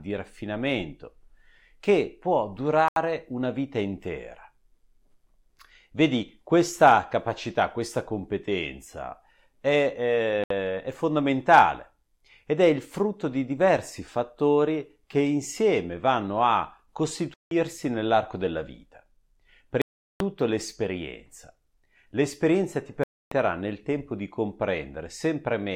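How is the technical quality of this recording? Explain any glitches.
The speech has five short gaps where it drops to silence and then picks back up. They sit at about 2.88 to 2.97 s (80 ms), 10.44 to 10.51 s (67 ms), 17.34 to 17.52 s (173 ms), 19.82 to 20.20 s (387 ms) and 23.04 to 23.32 s (280 ms). That's likely a Bluetooth dropout: packets didn't reach the headphones in time, got discarded, and playback stayed silent until good data arrived, carrying on as if it had kept playing.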